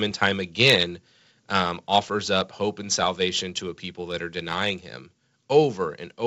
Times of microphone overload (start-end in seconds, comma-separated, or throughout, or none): 0.61-0.74